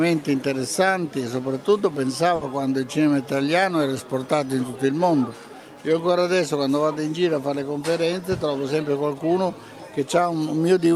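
A short audio clip with one burst of packet loss at 2.35–2.44 s: the last sound is stretched and faded for about 60 ms, then playback jumps ahead, skipping about 60 ms. Unlike a plain dropout, the gap is filled with decaying held sound rather than silence.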